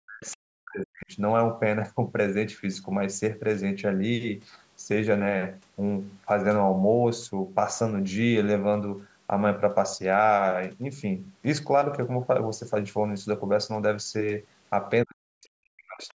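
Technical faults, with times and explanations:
0.00–1.13 s, speech suppressed in double talk: The speech drops sharply, by about 40 dB at its deepest, over roughly a second in total. It dips and breaks up in pieces. The likely cause is both sides talking at once. The echo canceller could not tell this talker from the loudspeaker echo, so it turned everything down.
0.32–0.36 s, other side's voice leaking through: A brief, faint scrap of a second voice appears, about 30 dB below the talker. It is likely loudspeaker sound that the echo canceller failed to remove from the microphone. It arrives inside the suppressed stretch.
15.04–16.17 s, speech suppressed in double talk: The last second or so dips again, by about 40 dB at its deepest, with the speech chopped into pieces. Likely the far side spoke over the talker here too. The canceller attenuated both voices together instead of only the echo.
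16.08–16.14 s, other side's voice leaking through: Another short fragment of the second voice comes through, about 35 dB below the speech. It is likely residual loudspeaker echo that slipped past the canceller. It sits within the band-limited call audio, which carries nothing above 8 kHz.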